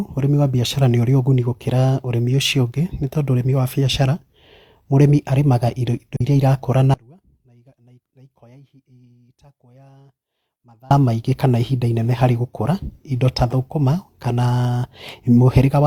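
Speech, with a brief dip at 6.16 to 6.21 s: the sound fades out and back in over about 43 ms, the mark of AAC frame loss with muting, where one lost frame was decoded as silence and the overlapping windows smoothed its edges. From 6.94 to 10.91 s, nearly four seconds, the speech cuts out abruptly, leaving only a faint leak roughly 30 dB below normal before snapping back, which is likely an audio dropout to a faint residue while the downstream path stayed live.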